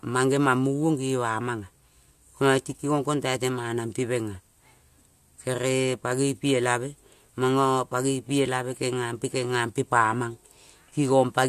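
Speech recording with no audible technical faults.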